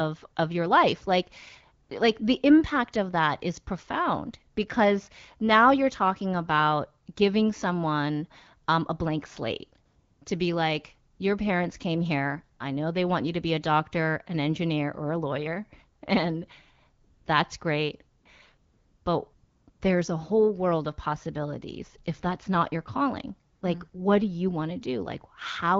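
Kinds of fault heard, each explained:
AMR comfort noise: ten times between 1.83 and 23.93 s, in pauses of 40 to 480 ms such as after "that's great", speech frames stop and smooth synthetic noise fills in. Unlike a dropout, the gap never goes silent; the real background becomes a steady hiss.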